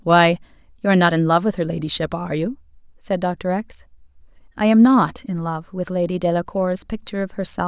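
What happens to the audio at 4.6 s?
Nothing goes wrong at 4.6 s; the speech there plays through intact, with no dropout, click, distortion or other fault.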